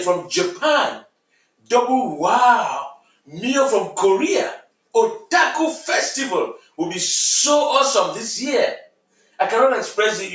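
Sound cut by the noise suppressor, from 9.17 to 9.39 s: the suppressor treated a stretch of sound near the end as noise and pulled it down by about 11 dB, so for roughly a fifth of a second it sinks audibly below its surroundings before recovering. The clip has passed through a call's microphone processing, which leaves nothing above 8 kHz.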